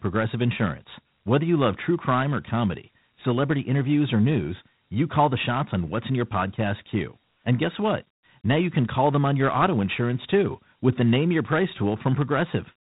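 Throughout the speech, the audio has passed through Dialogic VOX ADPCM, which stores each sample as a coarse 4-bit step, consistent with 32 kbps. Nothing survives above 3.9 kHz, so the speech sounds narrow and telephone-like, with a plainly audible gritty hiss tracking it.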